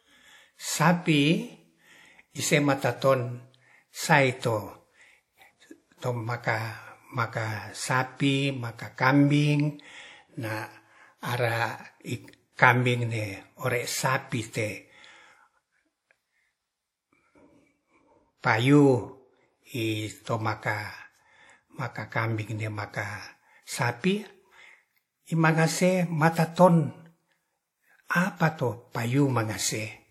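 WMA compression, throughout the speech, is the likely cause of the plainly audible codec damage. A transform coder with long blocks smears its quantisation noise over tens of milliseconds around each sound and drops weaker spectral lines, so consonants ring and vowels turn washy, with a hiss that swells and fades with the signal. Nothing is present above 16.1 kHz, and the damage fits an early WMA encoder at around 48 kbps.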